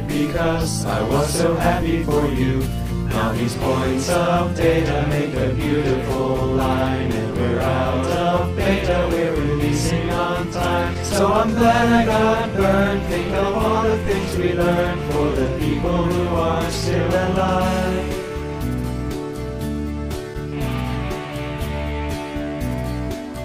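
No technical faults can be heard anywhere in the audio. There is no event here that needs a time mark or further description.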